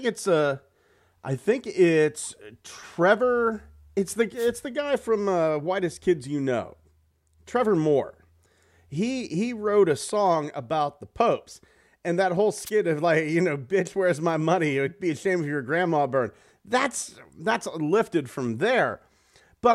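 At 4.36 s, just after "it's the", a wireless microphone noise hit cuts in for about 0.13 s. A second one follows at 12.65 to 12.70 s, after "and that whole". Both sound like a brief swish of static over the speech. The analogue FM radio link dipped as reflected signals cancelled. Receiver noise surged into the gap. Speech resumes with "the guy from uh" and "of like you know".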